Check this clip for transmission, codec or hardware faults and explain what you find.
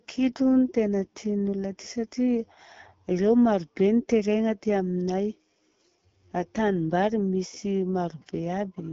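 One fault runs through the whole recording. The speech passed through an AMR wideband (HD Voice) codec at a low rate, which fits 8.85 kbit/s. With so few bits, its pulse-excited vocal tract model leaves the speech plainly rough and raspy, and nothing reaches above 7.5 kHz.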